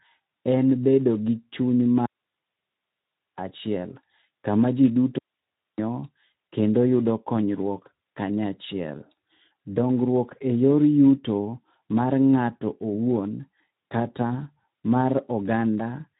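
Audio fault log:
Throughout, Speex codec: the speech sounds hoarse and grainy, with a dull top where nothing reaches above 3.8 kHz. This is plainly audible damage from a CELP speech codec that has too few bits to describe the excitation signal, so the fine structure of the voice is replaced by coarse, noisy approximation. The sound fits a Speex setting around 11 kbps.
2.06–3.36 s and 5.18–5.78 s, digital wireless dropout: the audio drops into clean, near-silent holes lasting 1.3 s and 0.6 s, the second coming just after "kama ji". Each gap opens and closes with a very fast fade and has no crackle or noise burst at either edge. That clean mute is the receiver silencing its output when the wireless link loses too much data to decode, rather than passing corrupted audio through.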